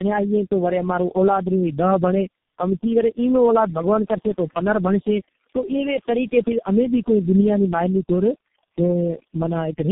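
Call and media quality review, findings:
Overdone noise removal, throughout: background dropped and broken into twinkling specks. Suppressor gating bands near its noise estimate. Unlike codec damage, artefacts fill pauses between speech.

Tandem speech coding, throughout: speech rough, muffled, warbly, nothing above 3.6 kHz. Sounds like four low-rate codecs in series, ending in G.723.1, each recoding prior damage. Worse than any single codec.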